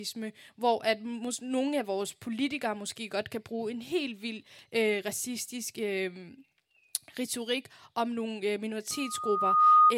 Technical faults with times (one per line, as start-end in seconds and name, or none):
8.91-9.94 loudspeaker feedback squeal